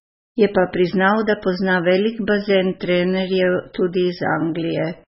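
Speech runs dull and watery from start to finish, with swirling, chirpy artefacts on s sounds and nothing above 5.6 kHz. This is likely MP3 compression at a very low bitrate, around 16 kbps, where the encoder cuts the treble and drops weak frequency lines frame by frame.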